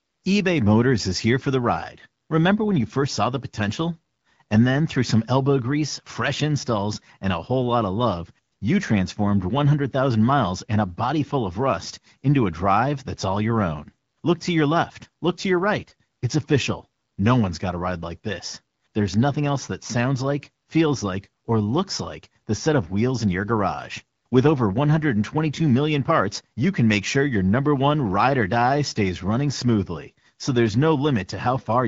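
No technical faults are audible.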